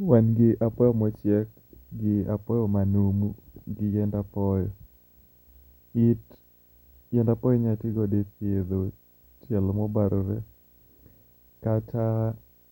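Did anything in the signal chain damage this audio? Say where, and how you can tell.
Yes: a screen or video cable coupled into the analogue wiring, laying video or display buzz under the speech throughout, a 59.94 Hz field-rate buzz with hash and a faint 15.7 kHz line tone, well below the voice.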